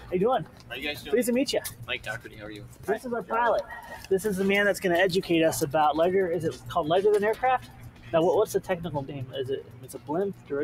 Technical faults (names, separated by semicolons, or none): noise suppressor applied to music or sounds; sound cut by the noise suppressor